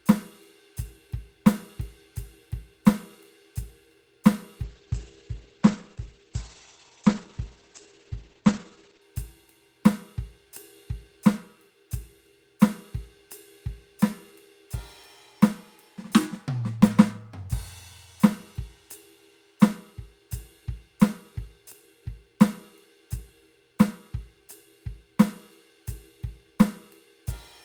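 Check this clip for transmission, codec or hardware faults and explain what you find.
One fault appears: a call bitrate drop from 4.66 to 9.13 s. The encoder was starved of bits. The music turns coarse and watery, losing everything above 8 kHz, which fits a fall from 64 to 11 kbps.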